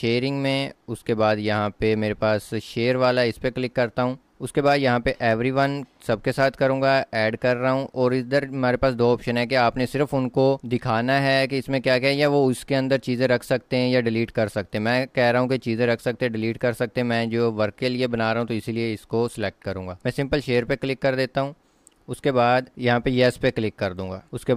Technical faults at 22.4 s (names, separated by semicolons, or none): none